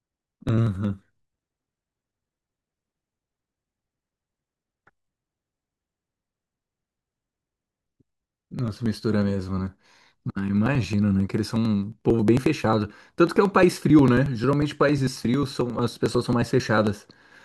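A background task stalling the USB bus or audio driver every 0.09 s, from 0.13 s to 17.32 s, skips roughly 10 ms of audio each time. These periodic USB or driver dropouts splice the speech together with small jumps, heard as a rapid, evenly spaced ticking.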